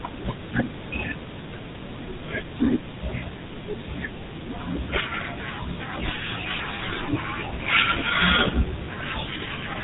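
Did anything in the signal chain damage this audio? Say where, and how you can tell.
Yes. Across the whole clip the speech has a buzzy, gravelly roughness, and nothing is left above 3.8 kHz, so it sounds dull and boxed-in as well as coarse. The damage is at the codec stage: this is the GSM full-rate codec, and the character fits its 13 kbps mode. It models the vocal tract and excites it with a regular pulse train built from only a fraction of the excitation samples. That sparse pulse drive causes the buzz heard throughout.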